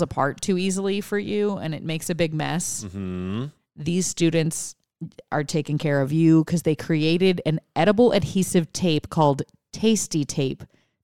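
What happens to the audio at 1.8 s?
Nothing goes wrong at 1.8 s; the speech carries on intact through that moment, with no dropout, click or distortion.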